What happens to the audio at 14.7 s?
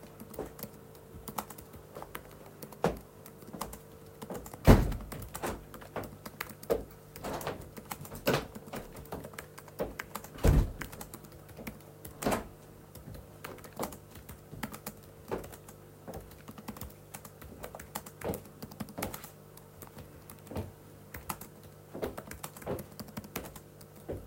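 Nothing goes wrong at 14.7 s; the sound carries straight through that moment without any dropout, click, glitch or other audible fault.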